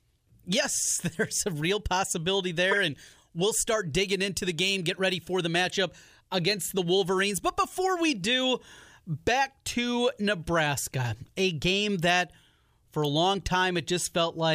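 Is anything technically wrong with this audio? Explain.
Yes. Right after "there's a real possibility", from 2.71 to 2.74 s, a short, sharp chirp-like blip cuts through the speech, peaking loud at around -10 dBFS. This is a corrupt frame decoded: a couple of compressed frames had damaged bits, and the decoder played them anyway. The misread gains and codes put energy at the wrong frequencies for the length of those frames, so a brief burst of spurious sound replaces the speech there.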